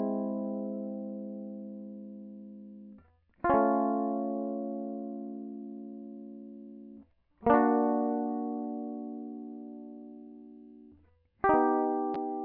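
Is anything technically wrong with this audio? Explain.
No, the music carries no audible technical faults at any point.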